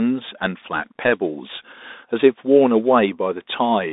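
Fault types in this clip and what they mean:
Bluetooth CVSD headset codec: The speech sounds thin and boxed in, limited to about 250 Hz to 3.7 kHz, with scratchy s sounds, granular hiss underneath and distortion on loud bright sounds. A one-bit delta coder whose adaptive step lags causes this, fitting a 64 kbps headset link.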